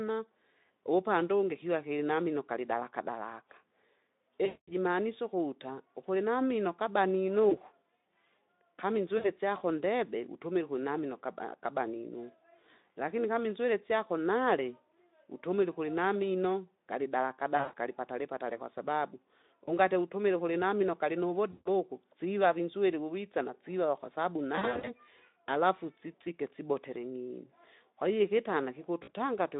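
VoIP packet loss concealed by the speech codec occurs at 4.45–4.72, 7.49–7.59, 9.17–9.28, 17.57–17.75, 19.66–19.73, 21.51–21.68, 24.55–24.90 and 29.03–29.14 s. Packets went missing, and the Speex decoder, running at 15 kbps within a 200 to 3.7 kHz band, filled each gap by extending its last pitch and spectral shape while lowering the gain. The worst gaps are about 220 ms, at 4.45 s and scattered around 24.6 s. There the speech smears into a fading buzzy tone or coloured noise and stays weak for a moment after the audio returns.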